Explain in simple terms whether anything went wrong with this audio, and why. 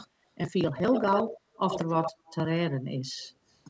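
From 0.76 to 2.36 s the speech is shadowed by a copy of itself about 87 ms behind and nearly as loud, so it sounds doubled. This is an echo leak, likely a call loudspeaker whose echo canceller let through what its microphone picked up.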